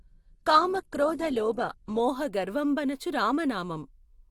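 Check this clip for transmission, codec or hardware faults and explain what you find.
One transmission fault is present. From 0.0 to 2.0 s, an adaptive stream starting at a low bitrate: the player begins on a lean rendition, which sounds like roughly 16 kbit/s Opus, with nothing above 12.1 kHz and heavier artefacts, then switches without a gap to a fuller rendition consistent with 64 kbit/s.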